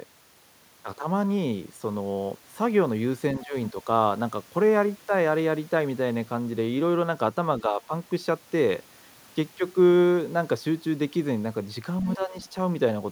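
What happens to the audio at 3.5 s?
Between 3.4 and 3.55 s the speech is pulled down sharply, by around 15 dB at its deepest, for roughly 150 ms. This is speech suppressed in double talk. The likely cause is an echo canceller that, with both sides talking at once, couldn't tell this talker from loudspeaker echo and attenuated both. Unlike a packet-loss dropout, the sound dips rather than going fully silent.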